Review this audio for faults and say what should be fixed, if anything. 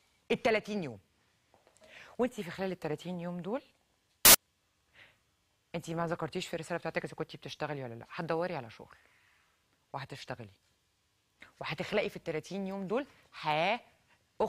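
A corrupt FLAC frame shows up from 4.25 to 4.35 s. The sound is disrupted by an error that peaks at about -10 dBFS. Bits in the compressed data were flipped, and the decoder did not verify the frame checksum. From the damaged bit onward, the prediction filter worked on wrong values. The roughly 96 ms length points to damage across two frames. Clean audio returns once the next intact frame begins.

To prevent this, make the decoder check each frame's CRC and mute or conceal any frame that fails.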